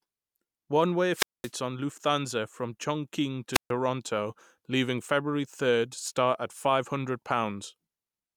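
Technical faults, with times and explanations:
1.11–1.52 s and 3.53–3.71 s: wireless microphone squelch dropout. The radio link from the analogue FM microphone weakens, so hiss swells briefly before the receiver's squelch shuts the output, leaving holes of near silence about 220 ms and 140 ms long before the speech returns.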